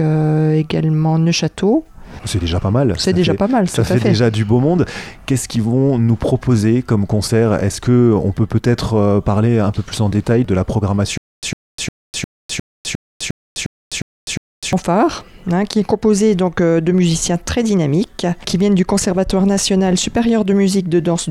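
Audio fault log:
11.18–14.73 s stutter with silent gaps: playback likely stalled and retried, repeating one 102 ms fragment ten times, each followed by 253 ms of digital silence.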